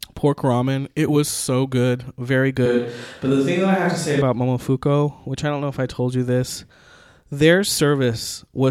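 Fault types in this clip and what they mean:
Switch to a distant microphone: the close microphone likely dropped out, and from 2.66 to 4.22 s the speech turns abruptly roomy and hollow, with faint room noise and little level change.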